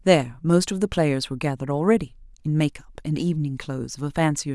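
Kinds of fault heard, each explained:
Nothing wrong turns up here: the speech comes across without any dropouts, glitches, distortion or other technical trouble to point to.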